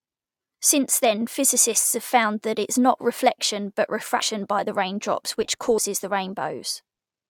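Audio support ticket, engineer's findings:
Compressed frames skipped at 4.19 s. Speech jumps ahead by roughly a tenth of a second, which fits about ten lost frames. Frames missing from the file or rejected by the decoder as damaged.

Compressed frames skipped again at 5.77 s. Shorter jump, around 50 ms, consistent with about five frames dropped. Same mechanism.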